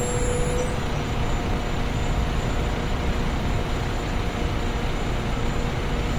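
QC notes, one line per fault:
Throughout, Opus compression: the everyday sound here has a noisy, rough, grainy texture on anything tonal, plainly audible, but without the swirly holes you'd get from MP3. That points to Opus likely in its music (CELT) mode, which keeps each band's energy but fills starved bands with folded or noise content. Bandwidth is still full, with content reaching about 20.1 kHz, and the damage fits a low rate around 24 kbps.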